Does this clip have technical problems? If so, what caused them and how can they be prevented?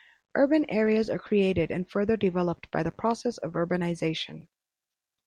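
No, there are no technical problems to point to in this speech recording. Nothing in it calls for a cause to be traced or a fix to be made.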